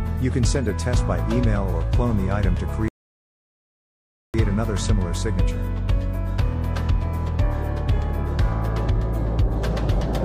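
At 2.88 s the audio drops to dead silence until 4.34 s, then picks up exactly where it left off. That's a rebuffering stall: the player ran dry of downloaded audio and waited for more, adding about 1.46 s without losing anything.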